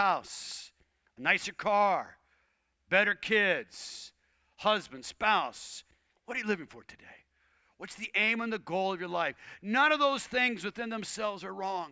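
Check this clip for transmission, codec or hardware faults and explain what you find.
Nothing in the speech signal points to a transmission, codec or hardware fault; the audio holds steady throughout with no audible break, distortion or other defect.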